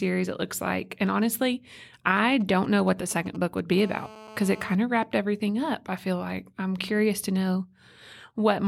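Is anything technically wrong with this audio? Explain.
Yes, two kinds of radio interference from a nearby 2G phone intrude on the speech.

From 2.17 to 3.75 s there is a galloping dit-dit-dit of brief 217 Hz buzzes, roughly 20 dB below the speech. These are GSM signalling bursts: a handset exchanging short control transmissions with the network, which the audio circuitry rectifies into audible pulses.

From 3.78 to 4.76 s, just before "of wrapped everything up", a hard, raspy buzz with many harmonics sits at 217 Hz, unrelated to the speech and about 19 dB below it. This GSM phone buzz comes from the handset transmitting during a call, its 217-per-second radio bursts demodulated by the audio circuit.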